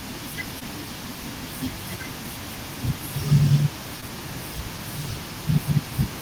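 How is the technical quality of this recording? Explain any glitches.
Two brief glitches affect the recording, both short concealed packet loss. At 0.59 to 0.63 s and 4.01 to 4.04 s, about 20 ms of audio arrived too late, and the decoder bridged each hole by extending the preceding sound for 10 to 14 ms before blending back. Unlike a true dropout, there's no silence, only a fleeting smear or wobble.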